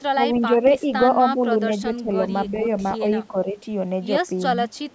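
Speech in a call, with the talker's own voice repeatedly pulled down in level, at 0.14–0.88 s, 1.35–1.39 s and 1.81–3.56 s, by up to roughly 10 dB in patches. This is speech suppressed in double talk, likely from an echo canceller ducking the near side while the far side was also talking. Unlike echo, nothing is added; the voice itself drops. Separately, an echo leak adds a faint delayed copy of the voice, about 0.32 s late, at 2.9–2.94 s (about 25 dB down) and from 4.76 s to the end (about 35 dB down). It likely comes from a loudspeaker endpoint whose canceller let residual pickup through. The repeat lag marks it as echo rather than a level dip.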